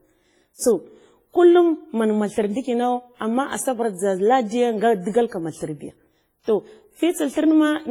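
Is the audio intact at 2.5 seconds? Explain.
No. At 2.5 seconds the speech carries WMA compression, which runs through the whole clip. The transform coder spreads its quantisation noise over tens of milliseconds and zeroes weak spectral lines, so the sound rings and turns washy, with a hiss that swells and fades with the speech. The damage is heavy, which points to a low bitrate of around 24 kbps. Unlike simple low-pass filtering, the top end survives up to 21.4 kHz, and the smearing likely comes from the codec.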